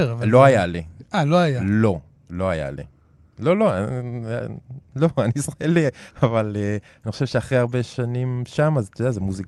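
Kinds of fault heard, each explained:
Nothing here counts as a fault; the speech has simply come through a normal call path, with the expected top-end limit around 12 kHz from the Opus coding.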